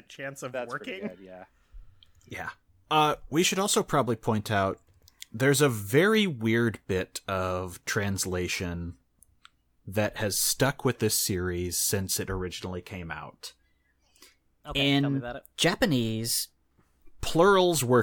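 From 13.35 to 17.20 s the speech plays as a section at the wrong speed, running 1.12 times too fast, likely from a clock mismatch. Voices rise about two semitones and hurry. A spectrogram shows harmonics shifted upward with compressed timing.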